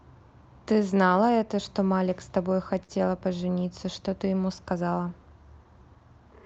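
Speech over what sounds like an Opus call path band-limited around 8 kHz, with a short stall from a late packet at 2.83 to 2.91 s: the jitter buffer ran dry, so a sound gets held about 54 ms before carrying on with nothing lost.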